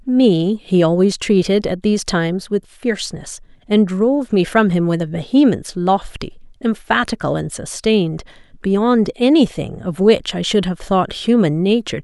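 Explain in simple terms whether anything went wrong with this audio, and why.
Nothing went wrong with this speech recording, and no technical fault can be heard anywhere in it. Put simply, the audio arrives as it was meant to, so there is nothing to point to or explain.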